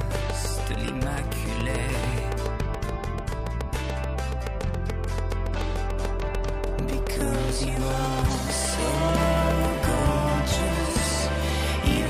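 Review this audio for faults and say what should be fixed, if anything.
A regular ticking, about 7 clicks per second, runs from 0.01 to 9.66 s, peaking around 10 dB above the sound: a train of clicks, likely electrical interference or a faulty connection or power supply. Shield cables, separate nearby equipment and check the interface's buffer and drivers.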